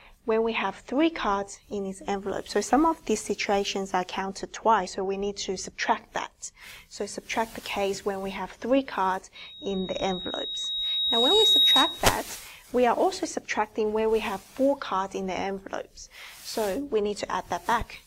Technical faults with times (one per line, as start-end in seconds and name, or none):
9.35-12.21 loudspeaker feedback squeal